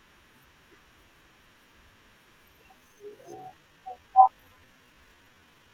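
At 2.74 s the pace of the speech suddenly drops to roughly two thirds of its normal rate, about 0.65 times, and stays there to the end, yet the pitch doesn't fall with it. Through this slowed stretch the speech drags. This is a time-stretched section, likely from software lengthening that part of the audio to fill a set duration and preserving pitch by repeating short slices.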